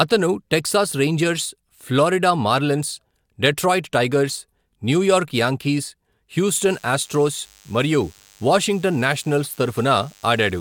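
From 6.54 s to the end, DECT cordless phone buzz: radio bursts every 10 ms, rectified by the audio circuit, give a thin 100 Hz buzz with many harmonics, well below the speech.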